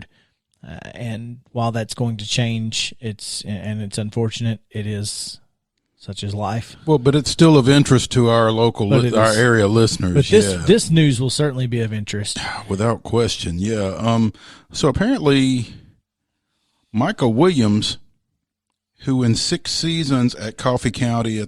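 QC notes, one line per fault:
Nothing to flag here, as no faults turn up anywhere in this speech recording.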